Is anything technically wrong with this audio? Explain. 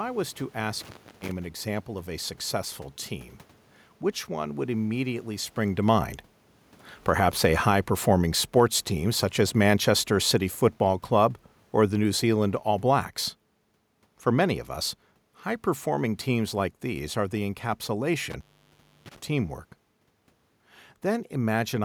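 Yes. Two kinds of fault are present in this speech recording.

Intermittent contact occurs twice. The first is from 0.81 to 1.32 s, between "was to" and "an example of a", and the second is from 18.31 to 19.16 s. A loose connection in the cable or plug briefly breaks the signal path. The line stays open for about 320 ms the first time and about 650 ms the second. During those gaps the speech vanishes, leaving only faint hiss, and small crackles mark the moments the contact breaks and remakes. On a waveform each gap shows as a sudden collapse to near-flat, with sharp spikes at either end. A spectrogram shows a blank band bordered by thin vertical broadband lines.

Automatic gain falling runs from 4.64 to 14.63 s, from just after "successful team which one" to "us high performing teams". The automatic gain control judged the input too hot, or its background noise too strong, and eased its gain down by about 10 dB over roughly ten seconds. 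The speech and the room noise beneath it sink together, which separates this from a talker simply moving. The waveform envelope tapers steadily, and the spectrogram darkens evenly across all frequencies, including the noise floor between phrases.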